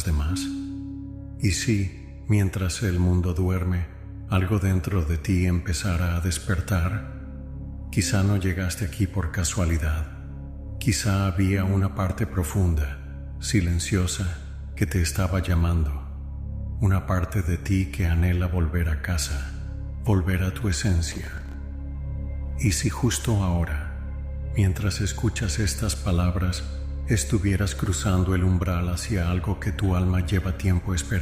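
At 21.12 s there's a burst of processor overload crackle running to about 21.54 s. The processor falls behind and keeps missing its deadlines for buffers only a few milliseconds long, around fifteen of them over that stretch. Each miss drops in a hard-edged gap of silence, so the sound turns gritty and torn until the load eases.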